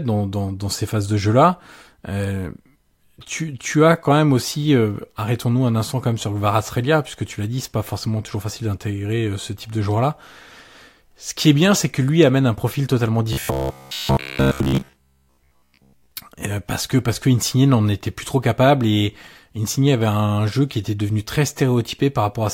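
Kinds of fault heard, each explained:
Robotic sound from repeated short buffers: new audio was likely arriving too seldom, so playback filled each gap by replaying its last short chunk while the real signal was skipped. From 13.3 to 16.1 s the speech becomes a rigid, metallic buzz at 66.7 Hz, which fits a chunk of about 15 ms repeated back to back. Roughly seven tenths of that stretch is repeated material, so the speech follows the original only roughly.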